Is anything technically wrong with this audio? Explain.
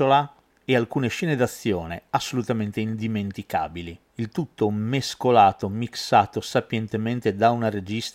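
No, the speech signal shows no technical faults.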